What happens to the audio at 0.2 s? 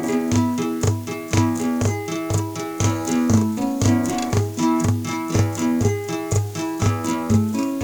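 At 0.2 s the sound carries a channel delay (doubling) that runs through the whole clip: one channel lags the other by 40 ms before both are summed to mono, so each event repeats once at equal level, a distinct slap rather than the hollow combing of a short offset or a decaying room tail.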